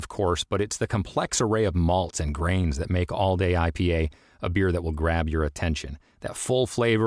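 Speech recording, no technical faults detected.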